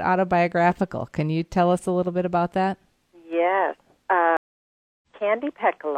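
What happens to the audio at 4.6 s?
A stream reconnect: the connection drops at 4.37 s, leaving about 0.65 s of silence to 5.07 s, then a fresh decoder resumes roughly 0.4 s further on.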